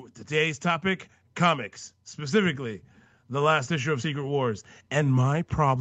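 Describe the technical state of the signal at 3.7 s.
At 3.7 s the signal is in the middle of an automatic gain rising, which runs from 2.16 s to 4.4 s, just after "topic comics". The gain control judged the input too quiet and is raising its gain step by step, about 6 dB over that span, so the speech and the background noise swell together. That shared rise sets it apart from a talker moving closer, which lifts the voice but not the room.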